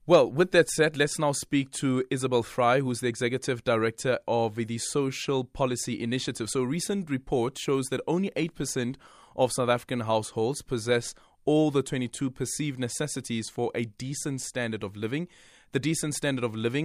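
Nothing stood out as a technical fault anywhere in the speech on listening.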